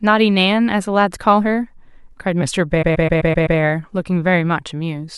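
From 2.82 s to 3.58 s the speech stutters, with the same 128 ms fragment replaying back to back six extra times. These are repeated frames: a run of compressed frames was delivered again, so the decoder played it again and lengthened the clip by 768 ms.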